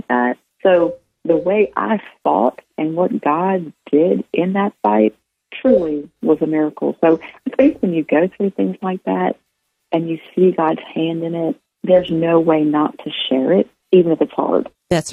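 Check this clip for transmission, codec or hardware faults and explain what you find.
Nothing in the way of transmission, codec or hardware trouble turns up here, and the audio runs along without anything catching the ear.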